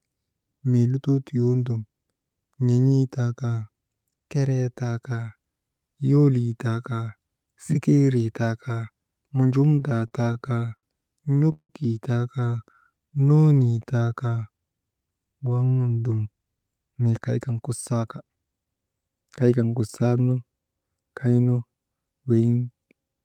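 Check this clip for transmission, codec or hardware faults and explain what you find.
Three kinds of network-delivery fault affect this speech clip, all between about 10 and 18 seconds.

Repeated stalls (stutter) occur from 9.79 to 10.85 s and again from 11.25 to 11.71 s. Packets arrived late, so the jitter buffer kept running dry and the receiver extended the last sound to cover the holes. In the first span twelve gaps total 208 ms, the longest 68 ms. In the second, five gaps total 203 ms, with one lasting 169 ms, long enough to fade. Nothing is lost, but the speech drags and stutters.

A jitter buffer slow-down follows from 12.58 to 14.11 s. With its reserve low, the receiver repeated single pitch periods to rebuild it, adding 195 ms and running at 88% speed. The pitch stays the same while sounds draw out.

A jitter buffer speed-up runs from 15.90 to 18.45 s. The buffer held too much audio, so the receiver trimmed short pitch-period pieces, removing around 0.3 s and playing at 111% speed. 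The pitch is unchanged, but delivery sounds noticeably hurried.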